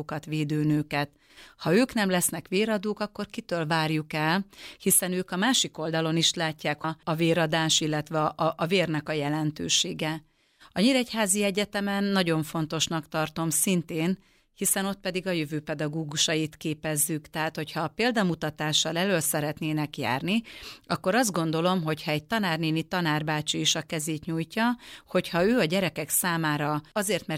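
At 6.83 s the speech jumps ahead abruptly with a brief blip, and a stretch of the programme is missing at that point. This is likely a stream segment skipped: one segment of the segmented stream failed to load, and playback continued from the next.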